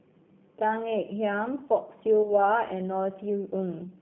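A speech recording carried through a G.729 codec, with the roughness and slightly synthetic texture that comes from rebuilding the voice out of a vocal tract filter, a pitch predictor and a few pulses per frame. The damage is plainly audible and fits an 8 kbit/s coder. The line band runs from about 150 Hz to 3.5 kHz, so a spectrogram shows a hard ceiling with nothing above 3.5 kHz, little below 150 Hz, and blurred, smeared harmonic detail inside that band. At 2.23 to 2.32 s there is VoIP packet loss concealed by the speech codec, most likely a single lost 10 ms frame. The decoder carried its last pitch and filter forward at falling gain, so the sound is briefly stretched and weakened, and recovery lags because each frame builds on the one before. The waveform shows a dip in amplitude there, and the spectrogram shows the disturbance for about 0.09 s.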